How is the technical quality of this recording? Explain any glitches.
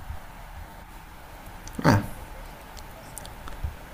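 Two quick glitches, both repeated buffers: at 0.71 to 0.73 s and at 2.9 s, fresh audio arrived late, so a roughly 10 ms chunk replayed twice, then once, giving brief clicky stutters.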